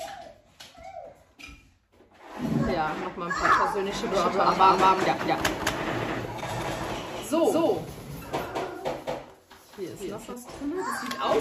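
From 4.11 s to 10.33 s a doubled audio track appears: a second, equally loud copy trails about 200 ms behind, likely from an extra capture path. It starts and stops abruptly, and the waveform and spectrogram show every onset repeated at that fixed offset.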